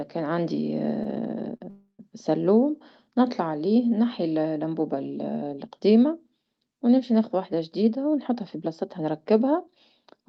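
At 1.57 s a short stall from a late packet interrupts the speech. A packet arrived late and the jitter buffer ran dry. The receiver held the last sound for 33 ms, giving a brief stretched buzz. Then it picked up where it stopped, before "سلوم مطلع".

A call audio freeze follows from 1.70 to 2.01 s, also just before "سلوم مطلع". The last sound is drawn out as a fading buzz, with 90 ms of silence inside. The pause lasts 287 ms. Nothing is lost. The likely cause is packets held up in transit, emptying the buffer.

From 7.73 s to 10.25 s, right after "ونمشي ناخذ وحدة", there is a jitter buffer speed-up. Too much audio had built up in the buffer. The receiver cut out tiny pitch-period slices, about 150 ms in total. The speech runs 5% fast and sounds slightly hurried, with pitch unchanged.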